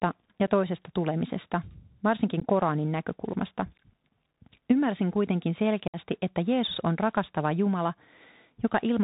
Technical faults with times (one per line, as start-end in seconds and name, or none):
0.00-9.04 Bluetooth CVSD headset codec
0.47 unconcealed Bluetooth headset packet loss
2.40-2.44 unconcealed Bluetooth headset packet loss
5.88-5.97 unconcealed Bluetooth headset packet loss